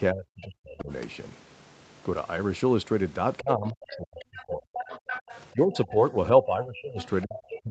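From 0.12 to 0.91 s the speech sinks and breaks up, falling by roughly 40 dB at its deepest, with about 0.7 s of that stretch affected. This is speech suppressed in double talk. The likely cause is that both ends were talking at once and the echo canceller, unable to tell this talker from the loudspeaker echo, turned everything down. The same dipping returns from 3.41 to 4.7 s, with about a second of the speech held down by as much as roughly 35 dB.

Overlapping that, from 3.68 to 5.41 s, a second voice comes through underneath, only about 10 dB below the speech. This is the other side's voice leaking through, most likely loudspeaker sound that the echo canceller failed to remove from the microphone signal.

From 5.53 s to the end, the speech is pushed down again by up to roughly 25 dB as the suppression returns. During this stretch the leaked voice surfaces twice more. The first is a short scrap at 5.75 to 5.92 s, about 20 dB down. 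The second runs from 7.01 to 7.6 s, at about 15 dB below the speech.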